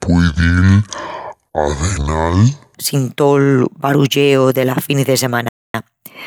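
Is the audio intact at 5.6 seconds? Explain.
No. A Bluetooth stall runs from 5.49 to 5.74 s, so 5.6 seconds falls inside a gap of about a quarter of a second where the speech drops to silence and then resumes. The likely cause is radio interference delaying packets on the wireless link: the headphones' buffer emptied, playback halted, and it only restarted once the retransmitted audio arrived, leaving this 0.25 s hole in the speech.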